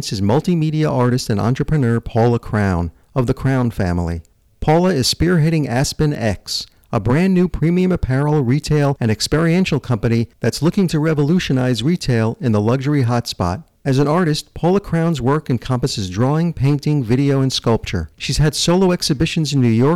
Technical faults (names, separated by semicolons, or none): hard clipping